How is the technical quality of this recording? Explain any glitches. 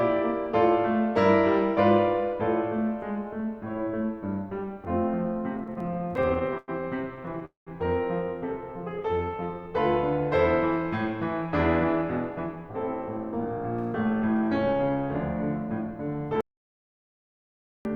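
The music recording has several network-playback glitches, clustered between about 5.6 and 9.7 seconds, with a further tempo fault and a hard dropout near the end.

Repeated stalls (stutter) occur from 5.57 to 6.70 s, from 7.16 to 7.43 s, and from 9.03 to 9.46 s. Packets kept arriving late, so the jitter buffer repeatedly ran dry. The receiver stretched the last sound across each gap, producing 18, 5 and 4 brief hitches, the longest about 99 ms. The music drags and stumbles without losing content.

A call audio freeze runs from 7.45 to 7.69 s, likely caused by packets being held up in transit. The music hangs as a fading continuation for 215 ms, including about 150 ms of silence, then resumes where it stopped.

A jitter buffer slow-down from 8.61 to 9.69 s comes from the receiver repeating tiny slices of the audio to rebuild its reserve. The music plays at 88% speed without any change in pitch, adding 137 ms.

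A jitter buffer speed-up from 11.84 to 15.03 s comes from the receiver trimming short pieces to cut excess delay. The music runs at 108% speed at the same pitch, so the tempo feels rushed, with roughly a third of a second removed.

An audio dropout to silence runs from 16.41 to 17.85 s, likely from a lost input or a mute upstream. The music cuts to dead silence for 1.44 s, and that passage is gone.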